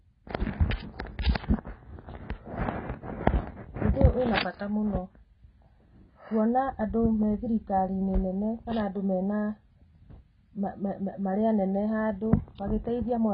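AAC compression runs throughout the speech, with nothing above 5.6 kHz and heavy damage, which fits a very low bitrate near 16 kbps. The encoder likely dropped and coarsely quantised the upper spectrum, leaving the sound dull, smeared and warbly on sibilants.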